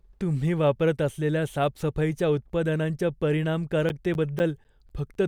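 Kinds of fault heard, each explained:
Periodic USB or driver dropouts: something is stalling the USB link or audio driver every 0.25 s from about 3.9 to 5.2 s. Each stall leaves a gap of roughly 10 ms of silence, about seven in all, so the speech picks up a steady ticking.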